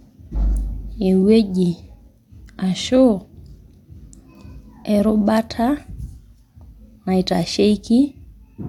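No technical faults are audible.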